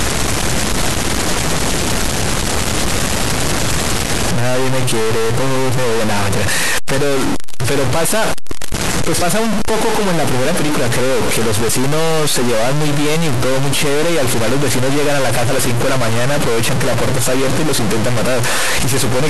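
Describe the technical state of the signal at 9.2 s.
At 9.21 s, compressed frames are skipped. Roughly 50 ms of audio drops out, about two frames at a 24 ms frame length, and the audio jumps ahead rather than leaving a silent gap. Running through the whole clip, including this moment, is a distortion that also fills the pauses with noise, most likely a stuck bit in the data. That noise in the pauses sets it apart from clipping.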